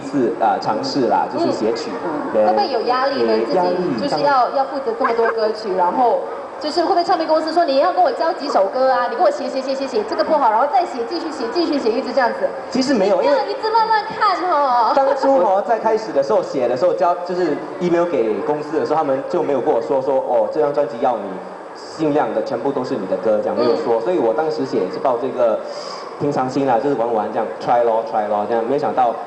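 Nothing stood out as a technical fault on listening to the clip.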